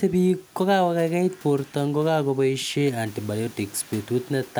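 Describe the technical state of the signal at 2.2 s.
At 2.2 s the signal is intact, with no technical fault to be heard.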